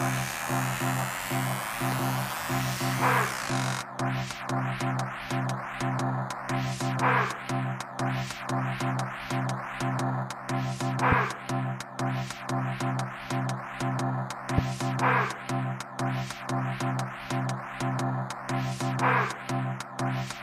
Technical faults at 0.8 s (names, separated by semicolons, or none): none